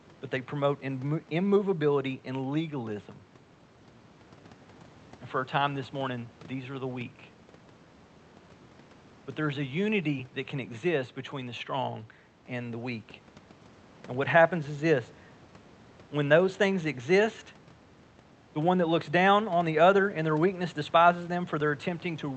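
Nothing in this speech recording stands out as a technical problem, with the call path behaving as a call codec does and top end tapering off around 8 kHz, which fits a wideband Opus setting.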